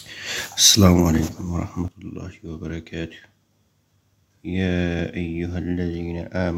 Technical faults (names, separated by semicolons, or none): sudden gain jump